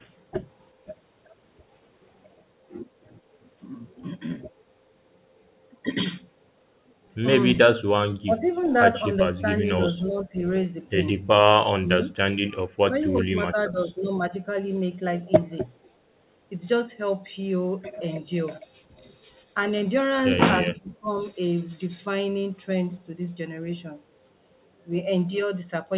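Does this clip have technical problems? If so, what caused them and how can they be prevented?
Yes. The speech level dips in six places: 8.25 to 8.77 s, 9.24 to 10.36 s, 11.81 to 12.16 s, 12.51 to 14.29 s, 18.85 to 19.02 s and 20.73 to 21.11 s. The drops reach about 10 to 25 dB. This is likely speech suppressed in double talk. The echo canceller could not tell this talker from loudspeaker echo while both sides spoke, so it turned the voice down. A better double-talk detector, or a headset on this talker's side, would prevent it.

From 8.53 to 8.66 s, a faint copy of the voice returns 380 ms late, about 30 dB below the speech. This is likely an echo leak. A loudspeaker's sound reached a microphone, and the echo canceller did not fully remove it. Headphones, lower speaker volume or a better-tuned canceller would stop it.

The sound is band-limited, with nothing above 4 kHz. That fits a 64 kbps G.711 call path.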